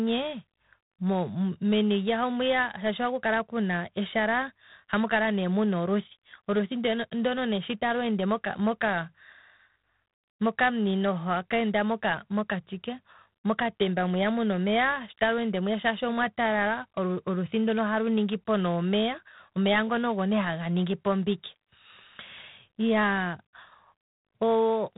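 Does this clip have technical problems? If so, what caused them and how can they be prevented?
Yes. G.726 ADPCM coding runs throughout: the speech carries a harsh, rasping hiss that rises and falls with its level, and nothing passes above 3.9 kHz. That coarseness fits 24 kbit/s, where too few bits code each sample's difference from its prediction. Keep to 32 kbit/s or a wideband codec.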